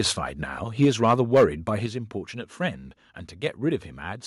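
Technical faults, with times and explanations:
0.82–1.44 s, microphone overload: the loudest speech peaks in this stretch turn harsh and crackly, with a gritty edge riding on the syllables rather than a clean rise in level. The peaks sit about 6 dB above what the converter can hold, so a small share of samples have their tops flattened, most likely because the input volume was set too high. Unlike a level drop, the loudness stays up while the tone frays.
0.85 s and 1.86 s, microphone volume stepped down: at each point the speech and the background noise fall together in one abrupt step, about 2 dB at 0.85 s and about 5 dB at 1.86 s, with no added distortion of their own. The first step lands just after the crackling peaks begin, which points to the call software reacting to the overload. Its likely cause is an automatic cut to the device's input volume. A fading voice would leave the background level unchanged; here the background drops too.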